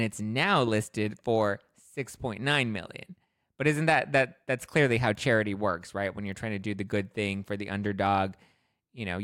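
No technical faults can be heard anywhere in this speech recording.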